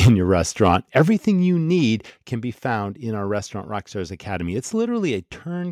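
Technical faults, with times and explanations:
0.02–0.12 s and 0.97–1.02 s, microphone overload: the loudest peaks have their tops cut off, about 5 dB over full scale in the first burst (roughly a fifth of samples flattened) and about 2 dB over in the second, between "your restaurant" and "you need can be". This is likely from input gain set too hot for the converter, and it gives a harsh, crackling edge.
0.08 s, 1.08 s, 2.1 s, microphone volume stepped down: the level drops suddenly by about 3 dB, then about 5 dB after "your restaurant", then another 5 dB. The first two drops come with a distorted peak, likely from call software lowering the device's input volume in single steps.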